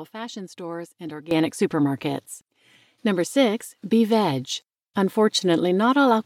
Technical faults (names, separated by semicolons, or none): sudden gain jump